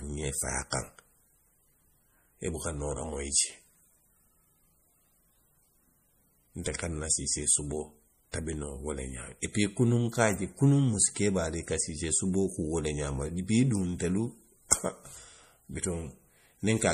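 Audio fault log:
Throughout, MP3 compression: the speech sounds watery and swirling, with nothing above 15.1 kHz, unlike a plain low-pass. Likely an encoder starved of bits, fitting about 40 kbps.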